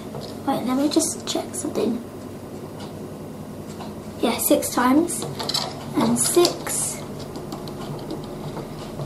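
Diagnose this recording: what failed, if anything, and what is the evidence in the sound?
A steady chirping warble sits behind the sound from start to finish, about 30 dB below it, flipping between pitches near 1 and 2 kHz. This is timecode bleed at the analogue wiring stage: 24-frame linear timecode on an adjacent track or cable has leaked in.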